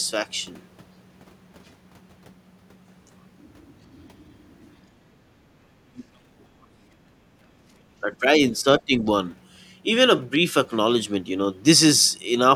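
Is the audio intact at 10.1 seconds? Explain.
Yes, at 10.1 seconds the speech runs intact, with no dropout, click, distortion or other fault to be heard at that moment.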